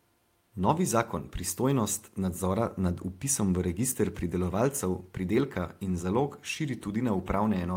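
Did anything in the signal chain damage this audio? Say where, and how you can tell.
Yes. At the network stage, a lost packet was rebuilt from error correction between 0.59 and 0.65 s. There is no dropout. Instead, about 40 ms of speech turns briefly rougher and noisier, which fits two separate 20 ms packets lost and replaced by the low-bitrate copies carried in the following packets. On a spectrogram that stretch is continuous but grainier and smeared, with less defined harmonics. The waveform shows no gap or flat line.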